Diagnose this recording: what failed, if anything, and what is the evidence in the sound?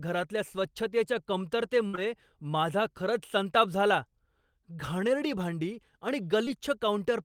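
Network side: a burst of packet loss at 1.87 to 1.95 s. The receiver stretches the last sound and fades it for about 60 ms, then skips ahead.

Also short concealed packet loss, at 1.95 s just before "माझा खरंच संताप झाला" and at 6.45 s after "घाणेरडी भांडी आणि". They leave brief smeared patches of about 17 ms and 14 ms.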